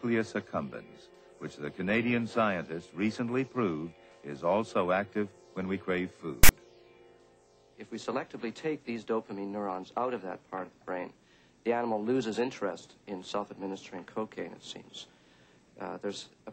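At 6.44 s a short burst of harsh static cuts in and stops abruptly at 6.49 s, about 55 ms in all. This is file tags played as audio: a block of text metadata has been decoded as sample data. Because text bytes sit in a narrow range of values, the result is a loud, gritty rasp pushed off-centre toward one side rather than a balanced hiss, with hard edges at both ends.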